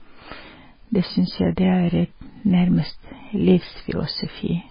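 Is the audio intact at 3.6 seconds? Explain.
No. At 3.6 s the speech carries heavy damage that runs through the whole clip, most likely from MP3 compression. Nothing is left above 5 kHz, so the treble is sharply cut off, which fits a very low bitrate of about 16 kbps. With so few bits, the encoder drops weak frequency lines, and they flicker on and off from frame to frame. The result is a muffled, watery, swirling sound with blurred attacks and dull s sounds.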